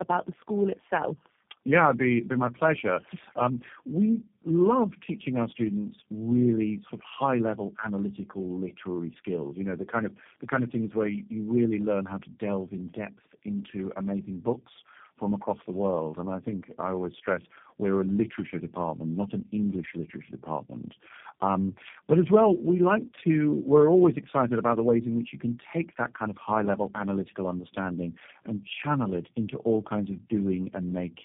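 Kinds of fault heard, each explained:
Tandem speech coding: the speech passes through three low-rate speech codecs in a row, AMR-NB then G.729A twice. Each re-encodes the previous one's errors, so it sounds rougher and more warbly than a single codec. Bandwidth loss alone would muffle it without this gritty, compounding distortion. Nothing is heard above 3.6 kHz.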